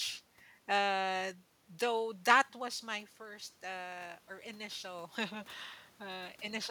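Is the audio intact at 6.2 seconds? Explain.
No, 6.2 s falls inside automatic gain rising from 1.69 to 6.65 s: the level dropped about 12 dB, so the gain creeps up about 6 dB, lifting speech and room noise together.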